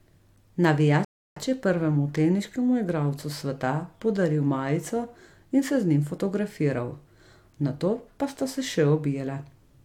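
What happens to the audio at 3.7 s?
Nothing goes wrong at 3.7 s; the speech there is intact, with no dropout, click or distortion.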